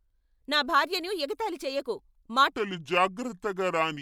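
At 2.52 s, right after "ఎగతాళి చేయకు", the speech drops into a section at the wrong speed. It runs to the end of the clip at 4.02 s. Playback slows to about two-thirds of the original rate. Pitch falls with it, by roughly seven semitones. The voice turns deep, heavy and drawn out, and every syllable stretches. The change is abrupt, not gradual. The likely cause is this stretch being played against the wrong clock.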